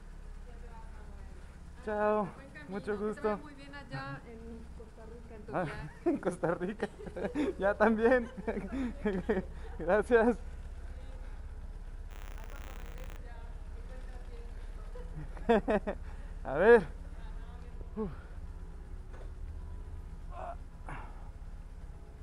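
From 12.1 to 13.16 s there is buffer tearing: the writing side and the playback hardware have drifted and cross inside each period, so a small sliver of every buffer replays audio roughly 40 ms old between hard joins, producing a steady 100 Hz robotic rattle, which fits a 10 ms period.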